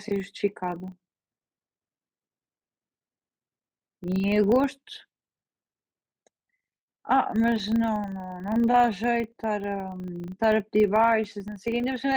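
From start to finish, the speech carries a filter restarted on every block. The filter loses its memory at each block boundary and begins again from silence. Each restart leaves a small transient. These arrive 25 times a second, once every 40 ms. Together they form a low, rough buzz at 25 Hz under the speech. The buzz rises and falls with the speech level. It is strongest on loud syllables and fades in pauses.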